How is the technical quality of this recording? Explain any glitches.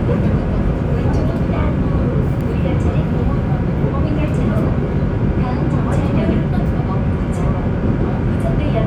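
Nothing here trips up the ear; the recording of sounds runs along without a single glitch worth pointing out.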